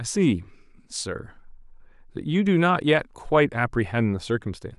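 Nothing in the recording stood out as a technical problem on listening.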